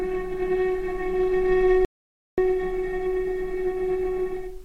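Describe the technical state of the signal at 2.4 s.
At 2.4 s the signal has just resumed after an audio dropout to silence spanning 1.85 to 2.38 s. For about 0.53 s the input was likely lost while the recorder kept writing silence, so the sound cuts abruptly to dead silence, with no room tone, and then returns mid-flow.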